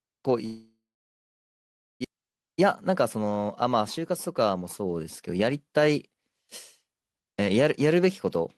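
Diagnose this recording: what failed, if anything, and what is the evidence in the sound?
Long network dropout, likely at the network stage, from 0.45 to 2.06 s. The last speech sound is stretched into a fading buzz, then about 1.2 s of near-silence follows. Speech resumes at 2.06 s with about a second of content gone, leaving the stream roughly half a second later than before.

Jitter buffer speed-up, at the receive buffer, from 2.14 to 5.88 s. Speech runs about 115% fast at unchanged pitch and sounds hurried. The buffer repeatedly discards single or few pitch periods to shed around half a second of accumulated delay after the outage.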